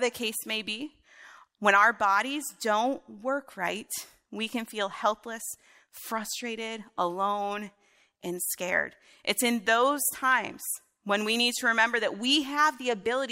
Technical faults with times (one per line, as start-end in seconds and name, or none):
none